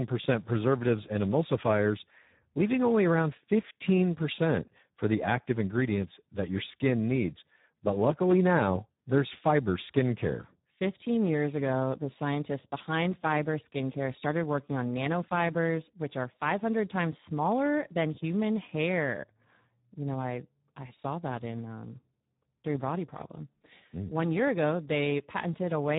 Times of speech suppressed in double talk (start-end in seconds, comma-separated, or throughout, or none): none